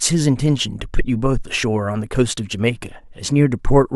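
Speech recording, no technical faults heard at any point.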